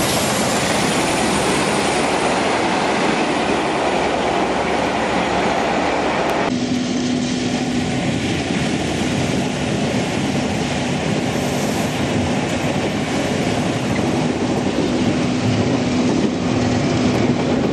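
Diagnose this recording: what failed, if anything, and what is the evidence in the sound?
The buffering stage that cuts the audio into chunks is misaligned, producing overlapping chunks: each block of roughly 2.5 s starts about 100 ms before the previous one ended, so that tail plays twice. The repeated 100 ms is heard as a brief stutter at the seam at 6.30 s, 8.90 s and 16.70 s. The spacing between these joins is a multiple of about 2.6 s, one chunk length plus the duplicated overlap.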